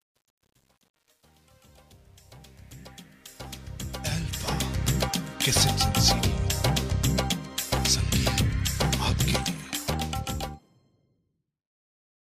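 From 0.0 to 4.89 s, the fade-in shows truncation distortion. The gain stage keeps too few bits, which fits roughly 9-bit resolution, with no dither. Up to 3.77 s the quiet sound turns gritty. On a waveform it looks staircased, and a spectrogram shows broadband grit.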